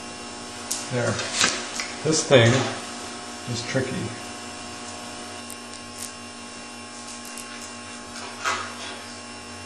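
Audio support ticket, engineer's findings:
Channel delay (comb filtering) from 5.40 s to the end: rough, doubled texture. Looks like one side around 20 ms late before the mono sum, notches from about 20 Hz up.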